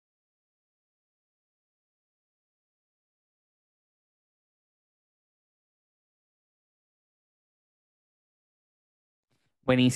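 Nothing in the recording stood out on listening.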